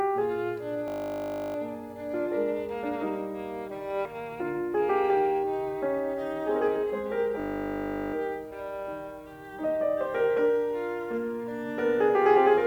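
Twice in this music clip, from 0.88 to 1.56 s and again from 7.4 to 8.14 s, the music freezes into a steady 50 Hz buzz before resuming. Each is a system hang loop: the computer or driver stalled while the sound hardware kept replaying the same 20 ms stretch of its ring buffer, some three dozen times per event, so that tiny slice repeats fast enough to fuse into a tone.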